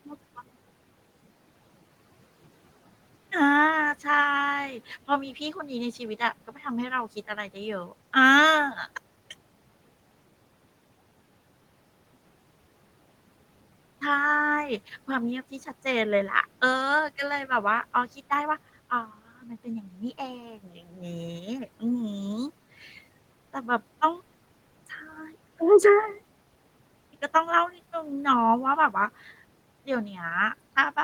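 At 19.42, 19.83 and 20.57 s, the noise suppressor cuts speech. It mistakes quiet parts for the room noise, which sits about 26 dB below the speech. Each drop lasts a fraction of a second and reaches about 7 to 10 dB. The sound there seems swallowed.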